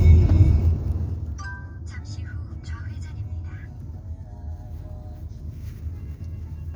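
From 0.4 to 1.46 s, a fine ticking rides on the sound as it drops by roughly 20 dB. This is zipper noise: the gain falls in unsmoothed 1 dB steps, about twenty per second, and each abrupt jump leaves a small click.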